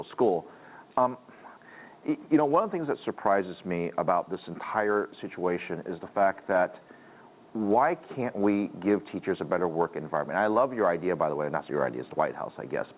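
No technical faults can be heard, and the audio carries the narrow telephone band of a call path, with nothing above 4 kHz, which fits G.711 A-law coding at 64 kbps.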